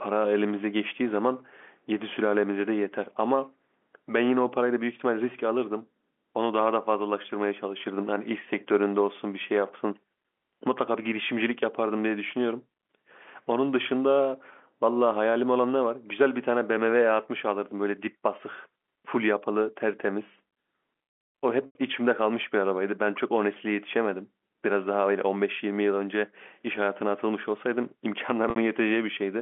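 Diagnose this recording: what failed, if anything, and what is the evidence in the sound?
The network is where this one goes wrong: two short dropouts, at 21.66 s (about 90 ms, which fits three lost packets) and at 28.50 s (about 60 ms, likely two). Both are packet loss with pitch repetition. The receiver keeps looping the last pitch period, so you get a brief held, buzzy tone that fades over roughly 50 ms, sinking toward silence in the longer gap before the speech cross-fades back in over the narrow G.711 telephone band.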